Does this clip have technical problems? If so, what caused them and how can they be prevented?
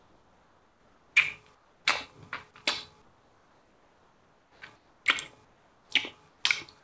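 Yes. In the pauses at 0.00 to 1.16 s, 1.55 to 1.85 s, 3.02 to 4.61 s, 4.76 to 5.06 s, 5.45 to 5.90 s and 6.29 to 6.44 s, the real background, sitting about 37 dB below the loudest sound, gives way to a flat, featureless hiss about 4 dB quieter (about 3 dB in the last gap). This is comfort noise in place of the background. The likely cause is discontinuous transmission: the sender's activity detector stopped sending audio during quiet stretches, and the receiver filled each gap with synthetic noise roughly matched to the background. Turning off discontinuous transmission on the sending side, or setting its activity detector to be less eager, would keep the real background in these pauses.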